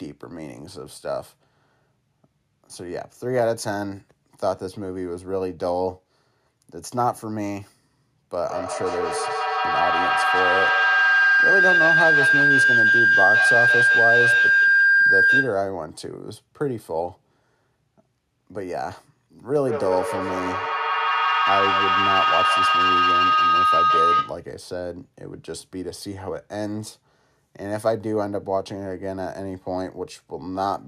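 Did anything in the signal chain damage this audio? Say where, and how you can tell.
Yes. This is a feedback howl from an acoustic loop in the call path: two devices in one room were on the same call, so each microphone picked up the other's loudspeaker with more than unity gain round the loop. From 8.46 to 15.72 s and again from 19.67 to 24.53 s, a tone around 1.5 kHz builds over the speech, peaking about 7 dB and then about 5 dB above it and pulsing roughly every 150 ms, the loop's round-trip delay.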